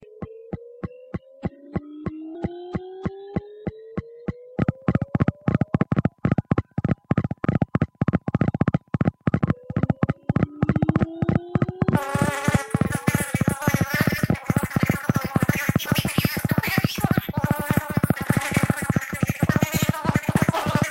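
At 5.82, 7.43 and 9.42 s the audio jumps forward as compressed frames are skipped: whole blocks of the encoded stream never reach the output, so roughly 150 ms, 300 ms and 100 ms of the sound vanish. The jumps are multiples of a 26.1 ms frame. Each join is a short smeared blip, not a sharp click, because adjacent frames overlap. On a waveform the envelope changes abruptly; a spectrogram shows a vertical seam where the texture shifts, with a faint broadband smudge.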